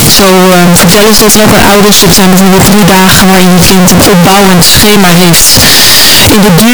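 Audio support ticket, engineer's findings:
Float read as integer, whole clip. Speech slammed to a near-square wave at an almost fixed, high level, harsh and very loud; background noise as loud as the speech, pitch still followable. Likely cause: 32-bit float samples decoded as 32-bit integer. Unlike clipping or gain overload, level is fixed regardless of source loudness. Quiet gaps don't drop back, because sign and exponent bits now set the sample value.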